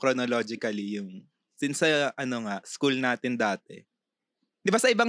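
Speech recording, no technical faults detected anywhere in the audio.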